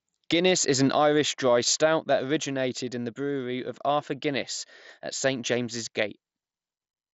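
Nothing stood out on listening to this speech, which comes through the Bluetooth mSBC headset path with its band ending at about 7.7 kHz.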